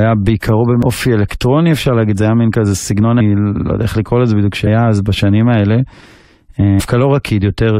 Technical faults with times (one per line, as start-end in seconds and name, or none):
0.82 damaged data in a compressed stream
3.19 damaged data in a compressed stream
4.66 damaged data in a compressed stream
6.79 damaged data in a compressed stream